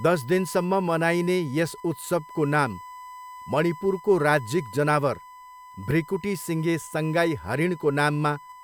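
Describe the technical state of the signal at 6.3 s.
At 6.3 s the speech carries USB whine, a steady 1 kHz tone present for the whole clip rather than just this moment. Current drawn by the USB bus in 1 ms frames leaks into the audio through power or ground, giving a fixed-pitch whine sitting roughly 20 dB below the speech. On a spectrogram it appears as an unbroken horizontal line at 1 kHz; the waveform shows a thin periodic ripple riding through the pauses.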